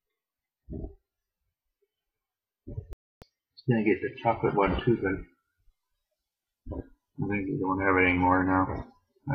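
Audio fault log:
0.00–4.42 s, de-emphasis applied wrongly: A treble-cut stage meant to reverse pre-emphasis acted on audio that had none, or cut twice, tilting the response smoothly downward to about 14 dB lower at 10 kHz than at 1 kHz, so the sound is dull and muffled.
2.93–3.22 s, digital broadcast dropout: The receiver stopped getting usable digital frames and muted its output until valid data returned, leaving a silent hole of about 288 ms, which fits roughly a dozen lost frames. Whatever was transmitted in that gap never arrives.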